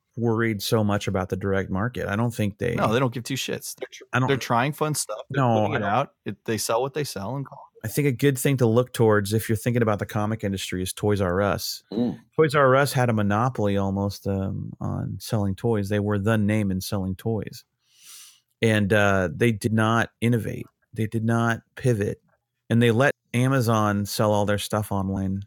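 Compressed frames skipped in this speech clip at 19.66–19.68 s, between "and uh they" and "not innovate", at 23.11 s after "not pivot and they", and at 25.16 s. Whole frames are missing or refused by the decoder, so the sound jumps ahead by roughly 70, 200 and 100 ms, which points to losses of a few frames each.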